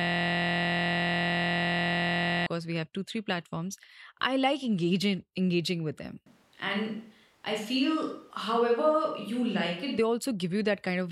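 From the very start until 2.47 s, the speech is caught in a system hang loop. The playback hardware keeps recycling one 23.22 ms block, consistent with a 1024-sample buffer, roughly a hundred times. This produces a steady 43.1 Hz buzz instead of speech.

Between 6.27 s and 9.98 s, the speech abruptly turns roomy and hollow, losing low end. The level stays about the same, and faint room noise sits around 35 dB below the speech. This is likely a switch to a distant microphone, reverting sharply at the end.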